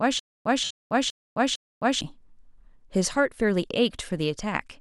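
From the very start to 2.01 s there is a stutter with silent gaps. A 0.19 s burst of speech repeats four times, each followed by about 0.26 s of dead digital silence, on a steady 0.45 s cycle. A stalled player or stream likely replayed its last fragment at each retry. Unlike a dropout, the same fragment comes back at a regular rhythm.

From 0.64 to 0.71 s there are lost LE Audio frames. For 60 ms, which fits eight 7.5 ms LC3 frames, the decoder kept reusing the last spectrum with scrambled phase. Voiced tone turns into a noisy, fading smear rather than the hard digital silence of the stutter gaps.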